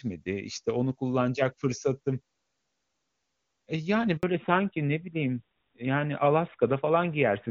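At 4.17 s a handover gap makes the voice die away for 60 ms while the call switches networks. The waveform shows a flat silent stretch until 4.23 s.

From 4.23 s to the end, a fallback to narrowband strips everything above 4 kHz, consistent with a drop from AMR-WB to AMR-NB. The spectrogram shows a hard ceiling at 4 kHz, and the sound turns duller.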